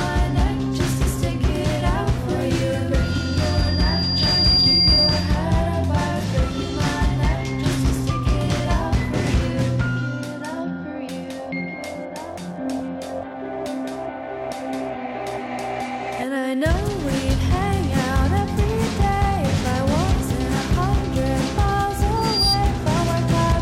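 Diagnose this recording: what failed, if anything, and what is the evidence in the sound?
Loudspeaker feedback squeal at 3.03–5.46 s and again at 22.16–22.62 s, in the acoustic loop from loudspeaker back into the microphone. A 4.8 kHz tone swells over roughly a second and a half, later within a fraction of a second, rising to about 5 dB above the sound as loop gain exceeds one there.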